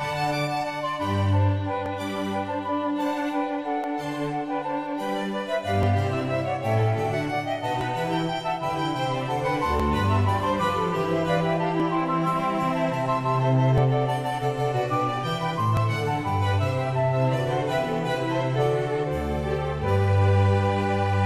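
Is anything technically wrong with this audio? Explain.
Yes: overlap between stream segments. Timestamps of consecutive 2-second segments overlap, so playback trims real audio, causing brief clicks or skips at 1.86, 3.84, 5.83, 7.81, 9.80, 11.80, 13.78 and 15.77 s.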